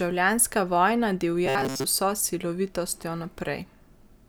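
From 1.46 to 1.84 s, new audio likely arrived too seldom, so playback kept looping a buffer of about 7.5 ms over most of that stretch. This robotic sound from repeated short buffers turns the speech into a rigid, metallic buzz at 134 Hz.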